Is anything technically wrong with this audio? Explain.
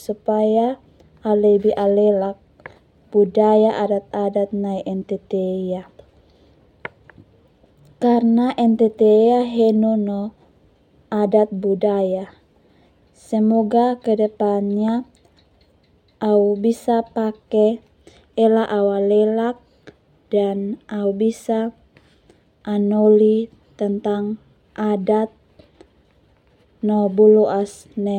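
No, nothing technically wrong can be heard in this speech recording. No audible problem turns up anywhere in the clip.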